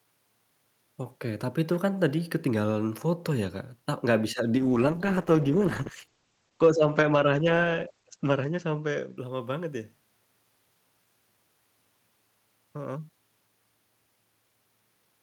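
At 4.57 s, right after "nggak bisa", the speech goes through a call bitrate drop lasting until about 10.15 s. The encoder was forced to spend far fewer bits, which fits a fall from roughly 64 kbps to 12 kbps, so it quantises coarsely and the audio bandwidth narrows from 20 kHz to 8 kHz. For about 3.5 s at the bottom, the sound is muffled and rough-textured, losing its top-end detail until the rate recovers.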